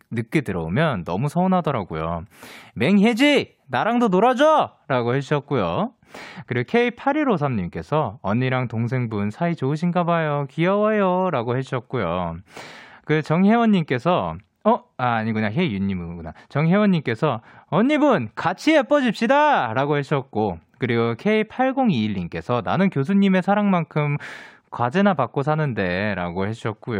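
From 4.58 s to the end of the speech, a channel delay (comb filtering) takes hold: one channel runs a couple of samples behind the other, a few hundredths of a millisecond, and the mono sum cancels what is common to both at evenly spaced frequencies. With so short an offset, the first notch sits high, around 10 kHz, so the top end turns dull. A spectrogram shows a fixed dark band there from 4.58 s onward; the waveform itself looks nearly unchanged.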